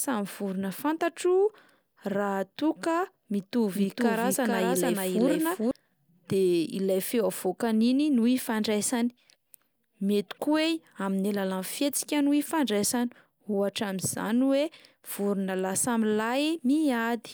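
A doubled audio track runs from 3.75 to 5.71 s. For those two seconds, a full-band second copy of the speech sits roughly 0.4 s behind the original and at about the same level. The likely cause is the signal being picked up again through a slower path. Because the copy has no decay or room colour, it sounds like a clean, overlapping repeat rather than an echo. It switches on and off abruptly at both ends.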